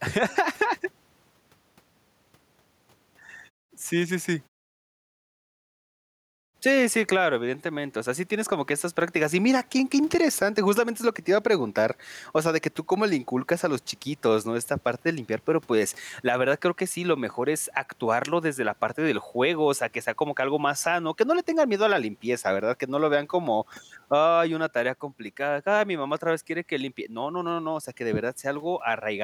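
Speech with gain pumping throughout: the level ducks by around 10 dB under every loud syllable, likely from a fast limiter clamping down on overdriven input gain. A waveform shows a flattened, squashed envelope.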